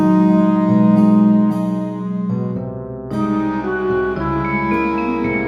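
Nothing stood out on listening to this recording.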